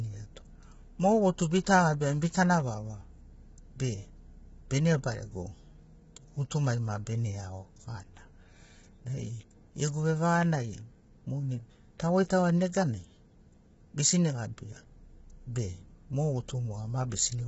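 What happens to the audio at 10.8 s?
At 10.8 s the speech has the rough, grainy texture that runs through the whole clip, and it is heavily damaged. The likely cause is low-delay AAC compression of the AAC-ELD kind, whose short frames resolve pitch harmonics poorly, so noise fills the gaps between them; the damage points to a bitrate near 16 kbps. A spectrogram shows smeared harmonics with hiss between them and nothing above 7.7 kHz.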